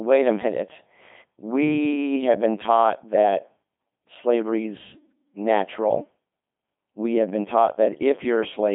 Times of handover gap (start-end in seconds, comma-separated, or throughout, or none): none